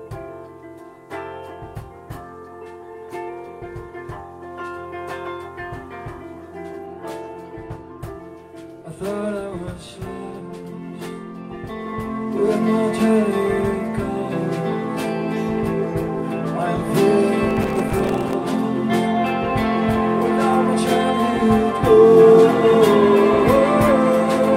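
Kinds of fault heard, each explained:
Processor overload crackle: the processor repeatedly missed its deadlines for audio buffers only a few milliseconds long, dozens of times over a short stretch. Each miss dropped a hard-edged silent gap into the output, so from 17.5 to 18.3 s the sound tears into gritty crackle, then clears.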